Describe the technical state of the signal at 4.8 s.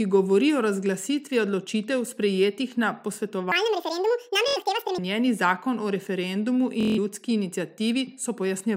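A section at the wrong speed runs from 3.52 to 4.98 s, so 4.8 s falls near its end. This stretch of speech plays back at 1.87 times its recorded rate. Because speed and pitch shift together, the speech sounds hurried and squeaky, lifted by roughly ten semitones. The likely cause is a playback or edit clock mismatched to the recording's rate. Normal speed returns just before "zakon o".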